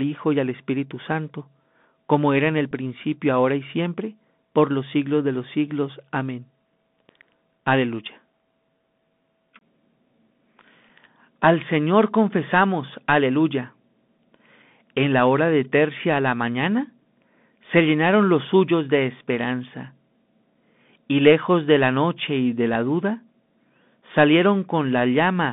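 Bluetooth CVSD headset codec runs through the whole clip. Speech is squeezed into a line band of roughly 150 Hz to 3.6 kHz and coded one bit at a time at 64 kbps, so sibilants turn scratchy, loud bright sounds distort as the adaptive step lags, and a grainy hiss sits beneath everything.

Bluetooth headset packet repeated at 2.71 s, between "como era en el" and "principio ahora y siempre". About 7.5 ms of audio was replaced by replayed bits, which fits two lost packets, giving a brief rough tick rather than a sustained buzz.

The same packet repeat recurs at 10.89 s, again spanning about 7.5 ms, consistent with two dropped packets. The decoder reused the previous packet's data, leaving a short gritty click in the speech.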